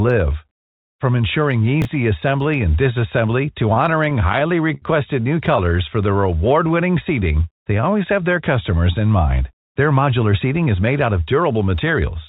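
A 10 ms chunk of this speech recording arrived late and was played two chunks after its proper place, between 1.82 and 1.85 s. The result is chunks out of order: nothing is lost, but the hard joins produce a brief jumbled flick. From 3.74 to 4.85 s, just after "assembly and disassembly to", packets repeatedly arrived late and the jitter buffer ran dry eight times. The receiver stretched the last sound across 148 ms in total, the longest fill lasting 73 ms, so the audio drags and stutters in repeated stalls with nothing missing. Between 5.65 and 7.91 s, ending just before "have their customers in", the jitter buffer was building a reserve and slowed playback by repeating pitch periods. This jitter buffer slow-down adds 188 ms and plays at about 92% speed, drawing the sound out at unchanged pitch. From 9.76 to 11.53 s, after "their customers in mind", the opposite happened: the buffer held too much and trimmed short slices, roughly 150 ms altogether. 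This jitter buffer speed-up runs the audio at about 109% speed and sounds hurried. The audio passed through a G.711 mu-law call path, which fits a 64 kbps stream and leaves nothing above 4 kHz.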